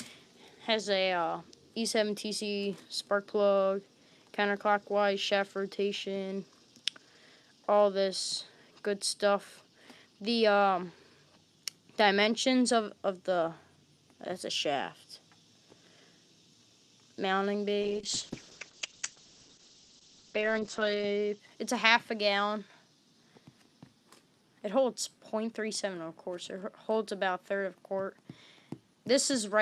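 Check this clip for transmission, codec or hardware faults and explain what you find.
One transmission fault is present: a call bitrate drop from 17.82 to 21.45 s. The encoder was starved of bits, so the audio is coded coarsely and the bandwidth collapses from 20 kHz to 8 kHz. This sounds muffled and rough, and the roughness points to roughly 9 kbps. On a spectrogram, content above 8 kHz vanishes abruptly.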